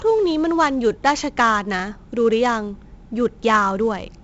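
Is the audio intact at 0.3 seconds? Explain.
No. At 0.3 s the speech carries 4-bit ADPCM compression, present throughout. Each sample is coded as a coarse step from a prediction, so a gritty hiss rides on loud sounds and fades with them, unlike plain bit reduction's fixed noise floor. Nothing above 7.8 kHz suggests a 16 kHz rate.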